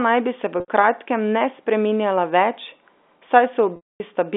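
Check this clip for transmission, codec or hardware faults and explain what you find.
Two transmission faults are present, both packet loss with pitch repetition, heard through a normal telephone-band G.711 path.

At 0.6 to 0.68 s, between "naj bi se v" and "kratkem ne spreminjala", the speech briefly holds on a slightly buzzy sustained tone for about 80 ms. At 3.76 to 4.0 s a longer 240 ms gap starts the same way and then fades to silence. In both cases packets went missing, and the receiver filled the hole by repeating the last pitch period. It faded that repetition out over about 50 ms, so the short gap sounds held while the longer one falls to silence.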